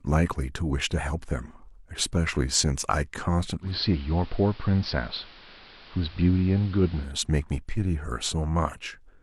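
A speech recording in which, from 3.60 s to 7.12 s, a hybrid receiver drops its digital stream and falls back to the station's AM broadcast. The change takes a 129 ms cross-fade each way, and during it hiss rises to roughly 25 dB below the speech, and the level sags by about 1 dB. This is digital radio blending to analogue rather than a simple filter change or dropout, because bandwidth loss and added hiss arrive together through a smooth fade and reverse the same way.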